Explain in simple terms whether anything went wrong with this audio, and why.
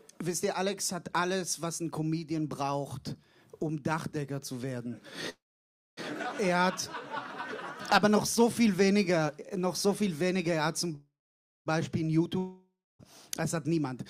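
Two kinds of fault can be heard. The first is a call audio freeze, at 5.29 to 5.99 s and again at 10.95 to 11.68 s. Each time a short buzz fades into silence for about half a second. Then the sound picks up exactly where it stopped. Nothing is lost, but everything after arrives about 0.7 s later. The likely cause is delayed network packets.

The second is a long network dropout, from 12.38 to 13.01 s. A fading buzz gives way to brief silence. When the sound returns, about 0.6 s of audio is simply gone. It was likely never delivered over the network.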